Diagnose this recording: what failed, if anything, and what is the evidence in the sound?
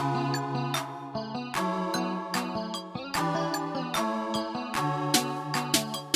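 Nothing's gone wrong here: every stage in the chain seems to have done its job, and there's nothing in the sound that points to a problem anywhere along the way.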